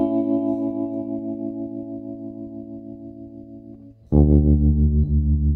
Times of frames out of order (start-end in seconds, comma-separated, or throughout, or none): 5.04-5.08